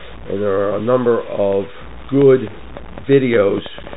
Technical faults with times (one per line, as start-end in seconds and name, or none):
0.00-3.96 low bit depth without dither
0.00-3.96 Bluetooth CVSD headset codec